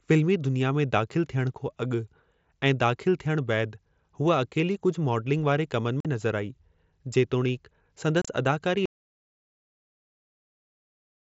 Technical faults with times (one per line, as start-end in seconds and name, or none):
6.00-6.05 unconcealed Bluetooth headset packet loss
8.22-8.28 unconcealed Bluetooth headset packet loss
8.86-11.35 audio dropout to silence